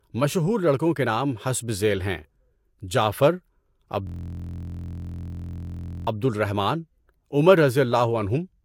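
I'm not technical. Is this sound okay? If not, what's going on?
No. From 4.07 to 6.07 s, just before "عبد الرحمن عمر", a system hang loop replays one 23 ms scrap of audio about 86 times, creating a steady 43 Hz buzz. This fits a 1024-sample buffer repeating while the computer froze.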